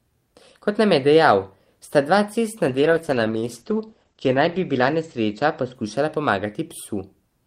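From 2.69 to 6.27 s the speech turns rough and muffled, a call bitrate drop: encoding fell from 32 to 11 kbps, cutting the bandwidth from 20 kHz to 8 kHz.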